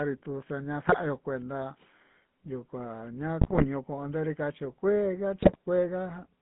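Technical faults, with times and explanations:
Throughout, GSM full-rate codec: the speech passes through an early GSM coder that models the vocal tract and excites it with sparse regular pulses, keeping roughly every third excitation sample. The result is a buzzy, gravelly roughness, and the band is confined to about 150 Hz to 3.6 kHz, consistent with a 13 kbps full-rate path.
0.89–0.98 s, 3.41–3.66 s and 5.42–5.57 s, GSM bit errors: corrupted bits reach the decoder and scramble the filter, pitch and gain values for individual frames, so the spectrum bends and the level jumps. The speech breaks into squawks, pops and gargling. The middle burst is longest, and the last has the highest error rate, with error rates rising to about 5%.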